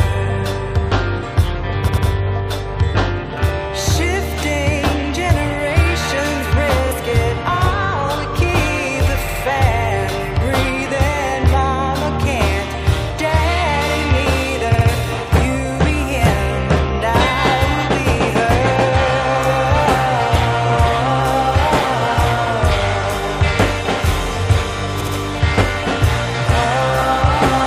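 There are four stutters from repeated frames, where a short stretch of compressed audio gets played twice more before things move on. The first is at 1.87 to 2.06 s, looping a block of about 93 ms, which fits a run of four frames. The others are at 9.28 to 9.42 s, 14.73 to 14.87 s and 25.00 to 25.14 s, each looping about 70 ms, roughly three frames' worth. Each adds 140 to 190 ms to the running time.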